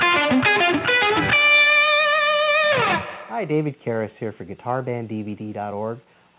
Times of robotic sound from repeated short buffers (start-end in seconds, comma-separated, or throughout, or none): none